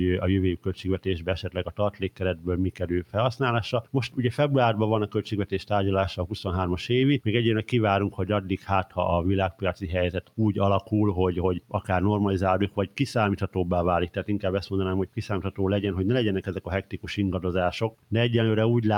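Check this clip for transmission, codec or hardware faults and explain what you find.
Three faults are audible: a coarse, undithered quantisation grain, a speech-oriented noise suppressor running on non-speech sound, and eight passages where that suppressor pulls sound down hard.

Low bit depth without dither runs through the whole clip. The grain sits roughly 40 dB below the signal and rises and falls with it. The rounding error tracks the waveform rather than forming a steady hiss, so quiet passages turn gritty and the faintest parts sputter between steps. That fits truncation to about 8 bits with no dither.

The noise suppressor applied to music or sounds is active throughout. A speech-tuned suppressor treats held tones, ambience and decays as noise and attenuates them. Sharp onsets pass while the sustained portions behind them are pulled down. The gain swings by roughly 10 dB, so the sound pumps and thins rather than holding a steady level, and tails are clipped short instead of fading naturally.

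Sound cut by the noise suppressor occurs at 0.57–3.16 s, 3.82–4.18 s, 8.1–8.98 s, 9.51–10.92 s, 12.69–14.24 s, 15.06–15.6 s, 16.41–17.08 s and 17.9–18.12 s. In each span the suppressor classed the material as noise and cut it deeper than the rest, by about 10 dB (about 9 dB at 8.1 s). The sound audibly sinks. The first span is the longest, with about one and a half seconds affected.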